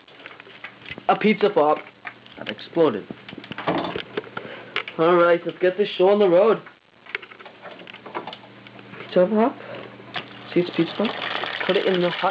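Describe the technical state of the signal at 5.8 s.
At 5.8 s the signal is intact, with no dropout, glitch or distortion, and only the expected wideband call-codec band limit, with nothing above 8 kHz.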